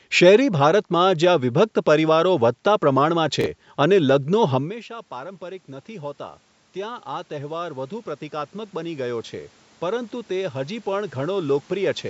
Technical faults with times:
3.41-3.46 chunks out of order
4.52-12.05 automatic gain rising

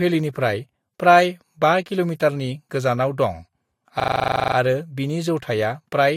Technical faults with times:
4.00-4.56 system hang loop

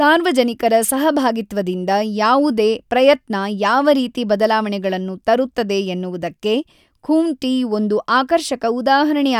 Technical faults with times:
none

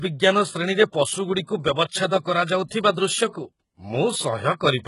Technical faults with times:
0.00-4.87 HE-AAC compression

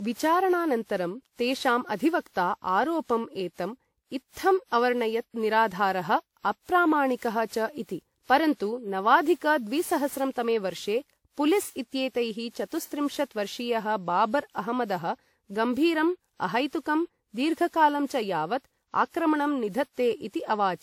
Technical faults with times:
0.00-20.83 generation loss

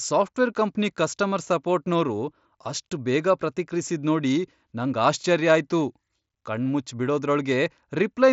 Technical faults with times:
none

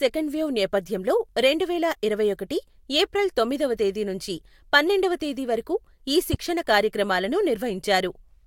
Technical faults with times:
6.34-6.36 loud pop

